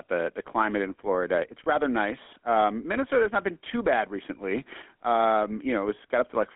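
From start to finish the speech carries the GSM full-rate codec's plainly audible buzzy, gravelly roughness, consistent with 13 kbps coding over a telephone line band of 250 Hz to 3.4 kHz. The spectrogram shows nothing below 250 Hz or above 3.4 kHz, with grainy, pulse-driven harmonics.

At 1.64 to 1.67 s, just before "rather nice", come lost GSM frames. The missing stretch is filled by repeating the previous frame's settings, producing a brief metallic ring. The 20 ms gap, consistent with a single frame, shows as a smeared, static slice.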